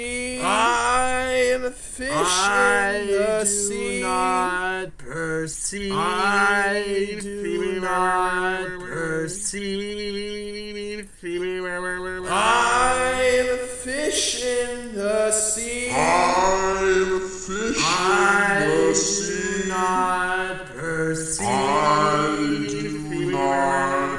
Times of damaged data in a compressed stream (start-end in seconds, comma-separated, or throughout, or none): none